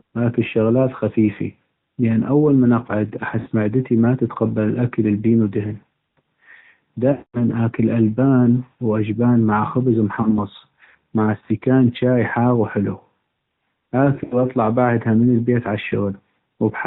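Throughout, the speech sounds muffled and buzzy, with nothing above 4 kHz. This is plainly audible AMR narrowband mobile codec damage at 10.2 kbps, where a coarse vocal-tract model rebuilds the voice from few bits.

Lost AMR speech frames make the voice warble, smear and fade as the decoder repeats its last good settings at falling gain. This first happens as a brief warble from 3.40 to 3.48 s, after "لأن اول من اقعد" and before "معدتي ما تتقبل الاكل", which fits about 60 ms of missing frames. From 7.12 to 7.42 s the voice is drawn out and fades to silence before "أكل البان واجبان مع", which fits about 220 ms lost. A short dip follows from 10.22 to 10.39 s. Finally, scattered dropouts from 14.16 to 14.44 s, the longest about 80 ms, precede "بعدها من".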